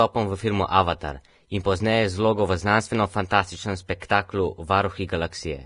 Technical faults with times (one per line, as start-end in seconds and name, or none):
0.00-5.66 Vorbis compression
4.00 pre-echo